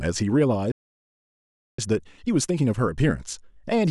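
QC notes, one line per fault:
0.72–1.79 s, playback stall: the speech cuts out in mid-flow and the output stays silent for about 1.07 s before the sound resumes. The likely cause is that the player ran dry of buffered data or had its output thread blocked, so nothing reached the output until it recovered.
1.79–3.91 s, time-compressed catch-up: once playback returns, the speech runs hurried at about 1.15 times normal speed while pitch stays unchanged. The player is trimming its backlog by removing small slices and cross-fading the joins.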